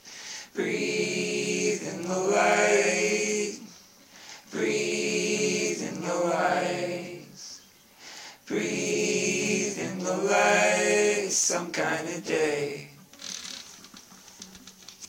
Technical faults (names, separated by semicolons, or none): block size mismatch (truncated)